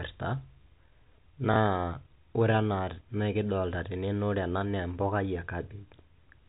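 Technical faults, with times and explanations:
1.54–1.56 s, packet loss with last packet repeated: a 20 ms gap, which fits a single lost packet, was filled by replaying the previous packet. A single repeat like this sounds like a small blip. On a waveform this shows as a duplicated 20 ms segment.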